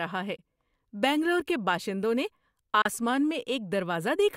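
Bluetooth dropouts interrupt the speech at 0.36 to 0.40 s and again at 2.82 to 2.89 s. Each is a brief hole, after which the sound resumes further along as though it had kept playing. This is likely packets failing to reach the headphones in time and being discarded. The first gap, about 15 ms of lost audio, fits a single dropped frame. The second, about 31 ms, fits two.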